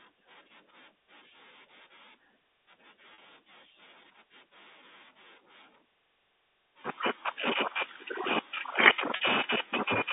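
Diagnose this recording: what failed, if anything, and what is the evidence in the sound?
The network dropped audio packets, and the receiver covered each gap by repeating the last pitch period: packet loss with pitch repetition. It occurs at 3.14 to 3.18 s and 9.16 to 9.20 s, 40 ms gaps consistent with two lost packets, and at 7.34 to 7.36 s, a 20 ms gap consistent with one. Each is short enough to sound like a slightly held, buzzy sound rather than a dropout, heard within the G.711 line's 200 Hz to 3.7 kHz band.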